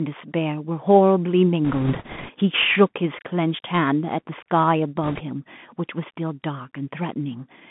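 Throughout, the speech carries a Bluetooth CVSD headset codec sound, consistent with a 64 kbps one-bit delta stream: a spectrogram shows nothing outside roughly 150 Hz to 3.5 kHz, with scratchy sibilants and granular hiss. From 1.65 to 2.31 s, bit errors on the Bluetooth voice link add a rushing crackle without sharp clicks, seen as a smeared broadband noise haze. The same happens, slightly weaker, from 5.03 to 5.22 s, consistent with an error rate of a few percent.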